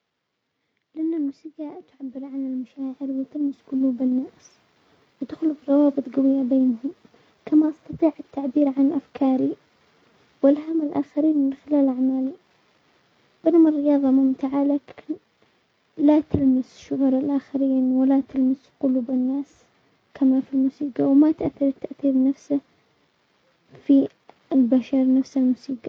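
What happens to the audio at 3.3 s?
At 3.3 s the speech and the background noise beneath it are both swelling in level together, partway through a steady rise that runs from 0.93 s to 4.19 s. This is automatic gain rising: the gain control judged the incoming signal too quiet and kept turning itself up, adding about 13 dB over those three-odd seconds. Because it amplifies everything equally, the room noise climbs right along with the voice.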